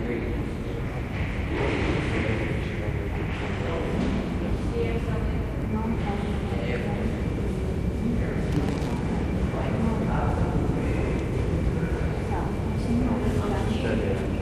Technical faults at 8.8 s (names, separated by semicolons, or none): loose connector crackle